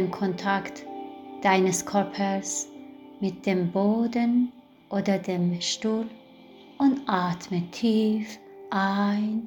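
No technical faults can be heard anywhere in the audio.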